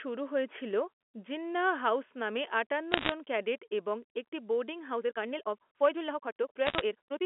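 At 1.02 s, just after "শুরু হয়েছিল", the sound drops in level by about 1 dB in one sudden step, and it drops again by about 1 dB at 2.04 s, just before "নামে আটান্ন". Both the voice and the background fall together, with no fade. This is a microphone volume stepped down, likely the call software lowering the device's input volume because it judged the signal too hot.

From 2.92 to 3.12 s, between "নামে আটান্ন" and "ক্যাডেট এবং একটি বোর্ডিং", a scatter of sharp ticks forms a brief crackle laid over the speech, while the speech beneath stays intact. These are bit errors on a digital phone line. Roughly one bit in a hundred was flipped in the G.711 stream, and each flipped bit corrupts a single sample. Where a high-order bit, or the sign of a loud sample, is hit, that sample jumps far from its true value and produces a click.

From 4.88 s to the end, the pace suddenly rushes to about 1.74 times normal speed, yet the pitch stays the same. 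This time-stretched section was likely squeezed by software that drops short slices of audio to shorten it while preserving pitch.

Inside that section, from 5.84 to 5.86 s, a loud peak takes on a harsh, crackly edge. This is microphone overload. The peak went about 2 dB past the converter's limit, and a few percent of its samples had their tops flattened, likely because the input volume was set too high.

From 6.66 to 6.81 s, more bit errors on the digital phone line bring back the same crackle of isolated ticks, again at roughly one bit in a hundred. Throughout the clip, the G.711 mu-law telephone coding confines the sound to the 250 to 3400 Hz line band.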